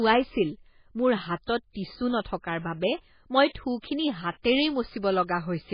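MP3 compression artefacts run throughout the clip. The speech has nothing above 5 kHz and sounds watery and swirly, with smeared consonant attacks, likely from an MP3 encoder starved of bits, which fits a very low bitrate around 16 kbps, cutting the treble and zeroing weak frequency lines frame by frame.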